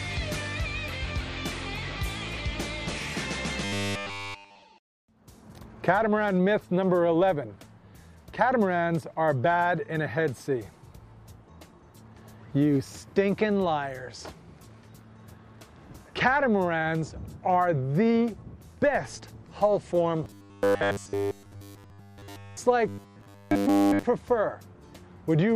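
Robotic sound from repeated short buffers appears at 3.65–4.63 s, 20.24–22.57 s and 22.88–24.03 s. It is a rigid, metallic 100 Hz buzz that replaces essentially all of the sound. The likely cause is one 10 ms buffer being looped while new audio failed to arrive.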